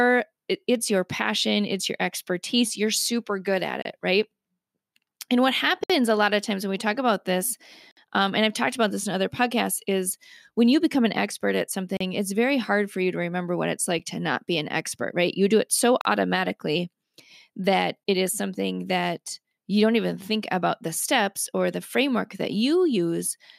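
Short, hard-edged silences cut into the speech at 3.82, 5.84, 7.91, 11.97, 13.99, 16.01 and 18.04 s, lasting 7 to 61 ms. Each is a gap between stream segments: mismatched timestamps on 2-second segments leave holes that the player fills with silence.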